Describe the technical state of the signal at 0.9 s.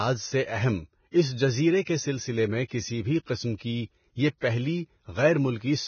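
At 0.9 s the speech carries the same damage it has from start to finish: it sounds like Vorbis compression, likely pushed to a very low rate, something around 18 kbps. Nothing comes through above about 6.6 kHz, and the treble that remains has been quantised so coarsely that its fine detail has turned into grainy, hissy noise. Consonant edges smear and tonal parts of the voice come across rough.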